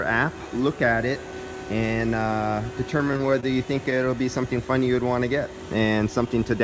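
Between 2.98 and 3.45 s the audio turns choppy, with tiny pieces dropping out. This is repeated packet loss: a run of short holes, the longest about 25 ms, was each patched by stretching the preceding sound, leaving roughly a fifth of that stretch synthetic. The clip came through a call path with nothing above 8 kHz, which fits the G.722 codec.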